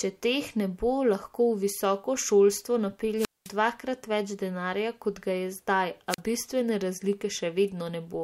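At 3.16–3.51 s, after "visoko šolstvo", and 6.08–6.20 s, after "kot ga je zdaj", a wireless microphone squelch dropout occurs. The radio link fades, so hiss swells before the receiver mutes for 210 ms, then 40 ms. That rising static sets it apart from a clean digital cut.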